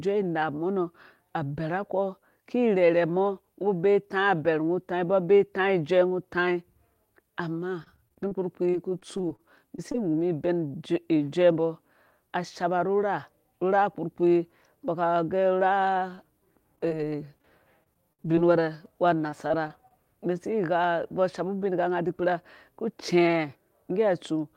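From 7.83 to 9.96 s, and again from 16.15 to 19.92 s, repeated packet loss chops the speech. Short holes, up to 33 ms and then 60 ms, are patched by stretching the preceding sound. The result is choppy and robotic.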